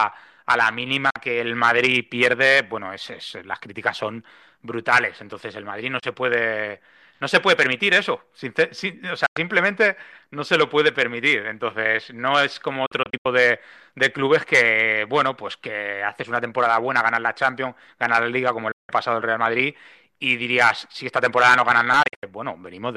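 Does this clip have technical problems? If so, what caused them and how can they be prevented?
Yes, the speech has digital broadcast dropouts, brief muted gaps with quick fades, at 1.10–1.16, 5.99–6.03, 9.26–9.37, 12.86–13.26 (several short holes), 18.71–18.90 and 22.03–22.23 s. The receiver lost corrupted frames and muted until good frames returned. Stronger, steadier reception with a better antenna or position prevents this.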